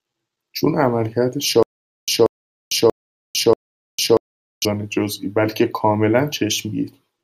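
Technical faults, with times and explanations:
1.63–4.65 s, stutter with silent gaps: a 184 ms burst of speech repeats four times every 636 ms, separated by 452 ms of digital silence, likely from a stalled stream replaying its last fragment; waveform shows identical blocks between flat gaps.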